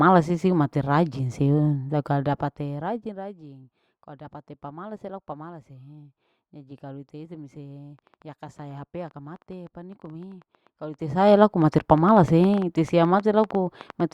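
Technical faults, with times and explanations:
7.99 to 14.01 s, train of clicks: for the last six seconds a run of sharp, similar-shaped ticks rides over the speech, around fifty of them at an uneven pace averaging 7.65 per second, and they continue through the pauses. Their peaks reach roughly 5 dB above the speech, so they stand out as popping rather than blending in. The cause is likely an intermittent pulse from electrical interference or a faulty connection or power supply, not anything in the recorded sound.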